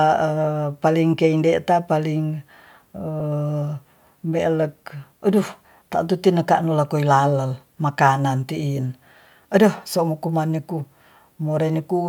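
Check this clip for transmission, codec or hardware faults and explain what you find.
One fault, at 3.20 s: a brief rough, hissy smear of about 10 ms where the speech loses its clarity. These are lost LE Audio frames. The gap fits a single 10 ms frame, which the LC3 decoder filled by replaying the previous spectrum with randomised signs, turning tonal detail into noise.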